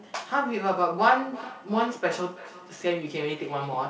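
Two devices in the same room were on the call, and one played back what the other's microphone had sent. That microphone picked the playback up again, and neither echo canceller could remove sound from the other device, so a feedback echo between two devices runs from 0.98 s to the end. The speech returns at a regular interval of roughly 300 ms, peaking at about 17 dB below the direct speech, inside a band that stops at 8 kHz.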